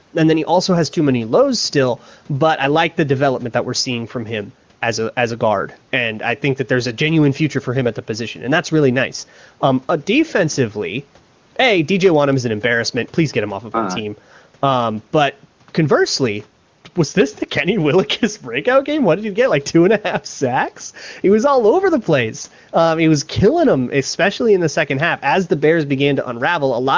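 Speech over a call path with nothing above 8 kHz, as the microphone processing leaves it, coded by the AMR wideband (HD Voice) codec at a quality that fits its 23.85 kbit/s top rate, and no faults to report.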